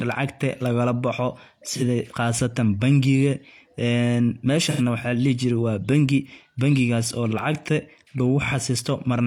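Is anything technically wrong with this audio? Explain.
Yes. This speech has AAC frame loss with concealment, twice. At 1.70 s, between "lagala boxo" and "qasatan bangiga", about 43 ms goes missing, which fits one lost frame. At 4.70 s, just before "waxa ladihi jire wa", about 85 ms drops out, which fits two frames. The decoder patches each gap by reusing the last good spectrum. Each patch sounds like a brief smeared, noisy or phasey spot.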